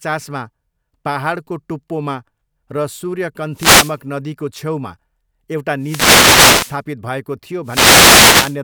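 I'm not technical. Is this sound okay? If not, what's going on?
No. The wireless microphone's radio signal briefly fades out, causing a wireless microphone noise hit three times: 3.51 to 3.98 s (just before "नदीको छेउमा"), 5.78 to 6.81 s, and 7.63 to 8.59 s. Each time, a swish of static rises over the speech.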